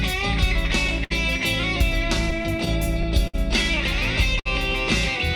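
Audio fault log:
throughout: clock drift between sender and receiver. The sender's clock runs slow, roughly 5 percent behind the receiver's, so the jitter buffer keeps draining and the receiver has to stretch or repeat small pieces to keep playing, leaving small timing hiccups spread unevenly across the whole clip.
1.04 to 1.12 s: short stall from a late packet. A packet missed its playout time, the jitter buffer emptied, and the receiver held the last sound for about 61 ms until it arrived, then resumed where it left off. Nothing is lost, but one moment drags with a slight buzzy or dipped hold.
2.31 to 3.35 s: repeated stalls (stutter). Packets kept arriving late across this second, emptying the buffer five times; the receiver filled about 95 ms in total, the longest wait 59 ms, roughly 9 percent of the span. Nothing is missing, yet the sound drags and stutters.
4.39 to 4.47 s: short stall from a late packet. 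Another late packet left the buffer empty, so the receiver extended the preceding sound for about 59 ms before continuing from the same point. No audio is dropped, but a brief held patch with a slight buzz or dip is audible.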